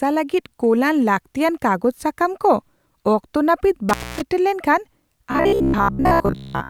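At 3.89 s an intermittent contact interrupts the speech: a loose connection opens for about 275 ms, so the signal drops out with crackle at the break and again at 4.22 s, leaving only faint hiss in the gap.

From 5.32 s to 6.69 s the speech turns into robotic sound from repeated short buffers, likely because audio arrived too seldom and short fragments of about 15 ms were looped in place of most of the real signal. The result is a rigid, metallic buzz at 66.8 Hz.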